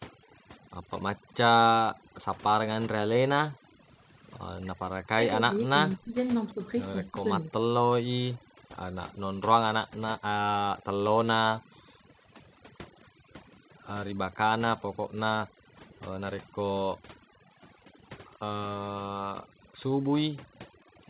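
Throughout the clip the background is turned down and breaks up into twinkling specks. This is overdone noise removal: the noise reduction was set too aggressively, switching off individual frequency bands near its noise estimate and taking the quieter parts of the voice with them.

From 0.26 to 3.80 s the room sound repeatedly dips or vanishes, by as much as about 40 dB, adding up to around a second of gaps. This is background gated by the echo canceller: it clamped the microphone down hard while the loudspeaker was playing, then released.

Between 4.65 and 7.52 s the talker's own voice sinks, dulls or breaks into pieces, dropping by roughly 35 dB for about one and a half seconds in total. This is speech suppressed in double talk, likely because the canceller couldn't separate the talker from loudspeaker echo while both sides spoke, so it turned everything down.

The background gating returns for a brief moment at 8.36 to 8.57 s, and again across 11.61 to 13.25 s, where the room sound drops out, each time by up to about 40 dB.

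Inside that stretch, from 12.99 to 13.04 s, a very faint, short scrap of voice trails the original by 212 ms, sitting roughly 35 dB below the speech. This is an echo leak, likely a residue of the far-end loudspeaker signal that the echo canceller failed to remove and that was sent back down the line.

The same gating returns at 15.49 to 16.58 s and 18.69 to 19.72 s, each pass dipping the background by up to about 40 dB for under half a second in total. Across all of this the call path's 4 kHz bandwidth limit can be heard as a narrow, telephone-like top end.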